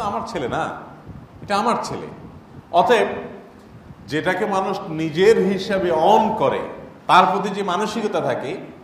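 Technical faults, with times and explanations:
4.06 to 5.85 s, drift correction step: the sound suddenly slows by 5.4% and drops 96 cents, nearly a semitone, then snaps back to normal speed and pitch. The likely cause is clock-matching software shifting the playback rate in one jump to rebalance its buffer.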